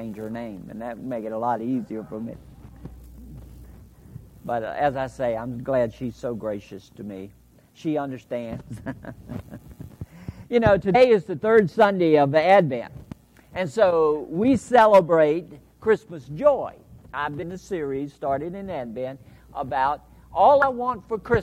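Brief glitches at 2.32, 10.94, 17.42 and 20.62–20.64 s reveal damaged data in a compressed stream: corrupted bytes derail the decoder, which loses sync and searches for the next frame.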